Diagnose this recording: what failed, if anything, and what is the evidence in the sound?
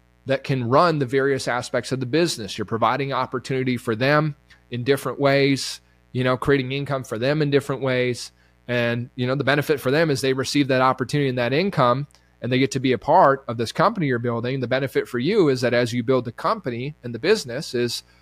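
The analogue wiring picked up mains buzz. A steady, raspy buzz on 60 Hz runs under the speech throughout, around 35 dB below it. Switching spikes from a dimmer, rectifier or missing shield arrive twice per cycle, spreading harmonics to several kilohertz.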